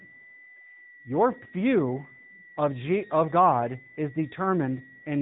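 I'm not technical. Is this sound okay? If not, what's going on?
No. Two things are wrong, and both last the whole clip.

A switching supply whistle is the first. A power adapter or regulator somewhere in the recording chain is switching on and off at a rate slow enough for human ears to hear. That leaks into the audio as a thin, high whistle near 2 kHz, sliding a little between about 1.9 and 2 kHz. It sits well below the speech and stays underneath it.

The second is AMR narrowband mobile codec damage. The speech has been squeezed through the compression used for ordinary mobile phone calls, which throws away everything above about 3.8 kHz and rebuilds the voice from a simplified model. The result plainly sounds like a phone call: muffled and dull, with a buzzy, artificial edge to the voice.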